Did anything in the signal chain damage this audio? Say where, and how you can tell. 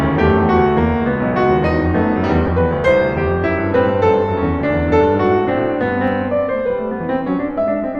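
Yes. At the network stage, lost LE Audio frames cause a brief noisy smear in the music at 2.47 s. About 15 ms is missing, consistent with two 7.5 ms frames concealed using sign-randomised spectrum, unlike a click or dropout gap.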